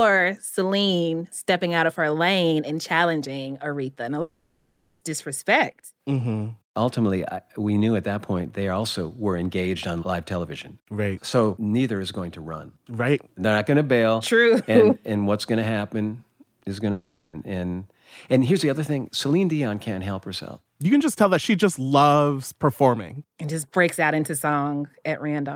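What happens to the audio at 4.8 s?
At 4.8 s the sound sits inside a long network dropout running from about 4.21 s to 5.03 s. The likely cause is a stretch of lost packets, about 0.8 s of audio, which the receiver covered by extending the last sound into a fading buzz or hiss rather than leaving silence. On a spectrogram the harmonics smear into flat, repeating bands that thin out, and the waveform shows a decaying, looped envelope before speech resumes with that portion missing.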